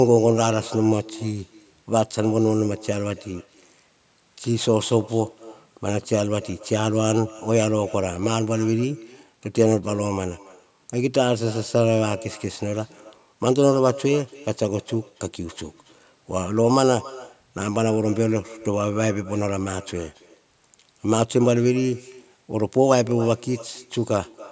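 Throughout the speech, an echo with no canceller is audible: the far end's loudspeaker output is picked up by its microphone and returned unremoved, so each phrase is trailed about a third of a second later by a thin copy roughly 20 dB down, within the call microphone processing's band limit of 8 kHz.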